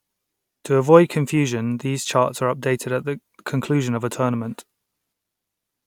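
No technical faults are audible.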